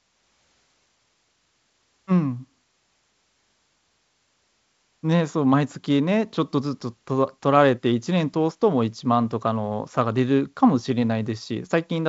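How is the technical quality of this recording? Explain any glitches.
Nothing stood out on listening to this speech recording: it carries G.722 wideband telephone coding at 56 kbit/s, with the band ending around 7.8 kHz, and no glitches were heard.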